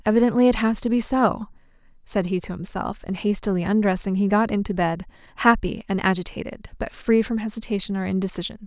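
Listening carefully to the speech, I heard nothing that stood out as a technical fault at any point.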